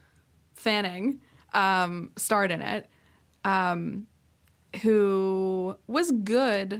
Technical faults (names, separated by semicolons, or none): lost packet rebuilt from error correction